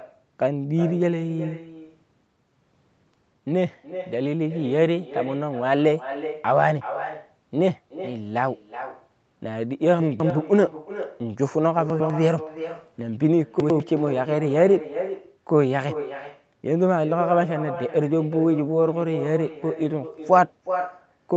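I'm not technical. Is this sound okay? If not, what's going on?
No. Two faults can be heard.

The first is echo with no canceller, and it runs through the whole clip. On the far end of the call the sound came out of a loudspeaker, the microphone there picked it up again, and nothing removed that copy. So the talker's voice is followed, roughly 0.4 seconds later, by a quieter, thinner repeat of itself.

The second is chunks out of order, heard three times: at 10.0 to 10.3 s, at 11.9 to 12.1 s, and at 13.6 to 13.8 s. The audio travels in short pieces about a tenth of a second long. Here a piece arrived late and was played after pieces that should have come after it, two places late the first time and one place late the other two. Nothing goes missing, but each spot sounds briefly jumbled.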